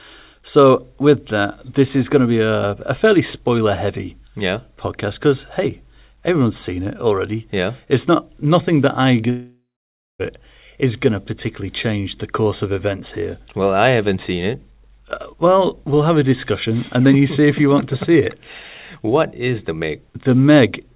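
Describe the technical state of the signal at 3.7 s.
At 3.7 s the speech is intact, with no dropout, glitch or other fault, only the narrowband sound of the G.711 call path, which carries nothing above 4 kHz.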